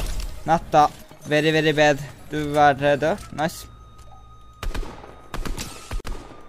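At 6.00 s the sound drops out abruptly for about 43 ms, then resumes at 6.05 s exactly where it left off, with the edges of the silence softened rather than razor-clean. This is a gap at a join of encoded pieces. The audio was encoded in separate sections and spliced without trimming, so the encoder's start-up delay and the padding of the final frame both remained at the seam as a short stretch of silence.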